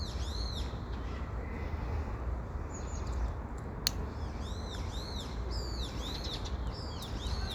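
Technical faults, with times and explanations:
No technical faults can be heard anywhere in the audio.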